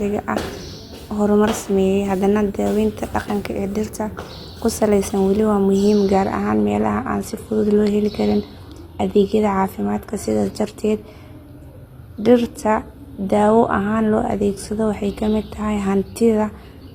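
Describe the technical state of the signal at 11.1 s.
At 11.1 s the speech is inside a stretch of adaptive stream at a lower bitrate, running from 5.94 s to the end of the clip. At 5.94 s the quality drops abruptly with no gap, as the stream falls back to a cheaper encoding when the connection slows, which fits a switch from 96 kbit/s AAC to 24 kbit/s HE-AAC. The treble thins, with nothing above 14.9 kHz, and codec artefacts become more audible.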